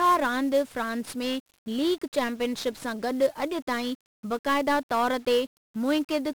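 From start to finish the speech sounds fuzzy and crackly, with a thick bed of broadband hiss burying the treble. This is heavy 1-bit DFPWM compression. Each sample is reduced to a single up-or-down step, which fits a rate around 48 kbps, so quantisation noise swamps the detail.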